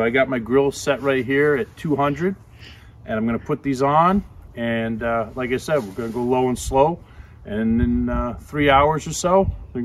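Nothing goes wrong anywhere in the clip, so there's no fault to point to at any moment.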